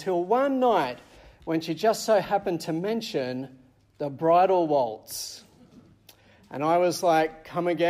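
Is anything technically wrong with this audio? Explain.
No, there is nothing technically wrong with this audio. No working path is listed to comment on, so there is nothing further to describe.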